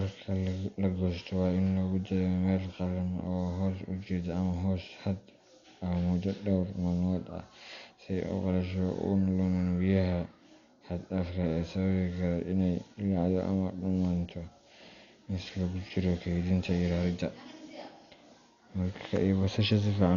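Dolby Digital compression, heard from start to finish: the speech has nothing above 6.9 kHz, so it sounds dull and boxed in, and the damage is heavy, with a rough, fluttering grain clinging to voiced sounds. This is likely AC-3 style coding starved of bits, at a rate that fits about 48 kbps. The encoder cut the band short and left many frequency lines without mantissa detail, so the decoder filled them with noise.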